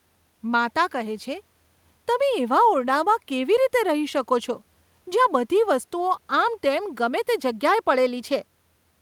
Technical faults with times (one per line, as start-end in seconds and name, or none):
none